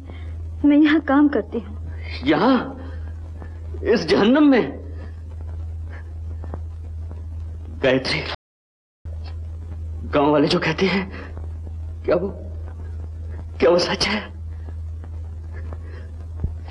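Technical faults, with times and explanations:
8.35–9.05 s, audio dropout to silence: the sound cuts off mid-flow and resumes abruptly 0.71 s later. The gap holds silence with no room tone, unlike a natural pause or gating. Likely the input signal was briefly lost while recording continued.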